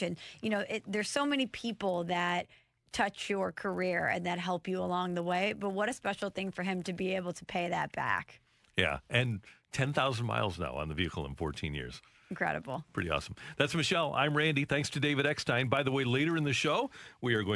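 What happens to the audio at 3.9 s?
At 3.9 s the speech carries the resampler-restarted-on-every-block fault, which runs through the whole clip rather than starting there. The 48 kHz to 24 kHz conversion was done on each 10 ms block separately, so the filter at every block boundary lacked the true neighbouring samples and left a small error there. Those errors recur 100 times a second, heard as a 100 Hz buzz riding on the speech wherever signal is present.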